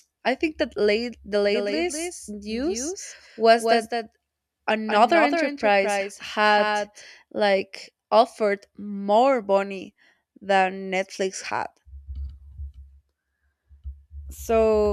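From 1.32 s, right after "I think that late", the speech picks up a second, slightly quieter copy of itself trailing about a fifth of a second behind, so every syllable is echoed crisply with no reverb tail or room tone. It cuts in and out abruptly, ending at 7.02 s before "like offered more money". This is a doubled audio track, roughly 5 dB below the original, likely caused by the signal being captured twice through a slower second path.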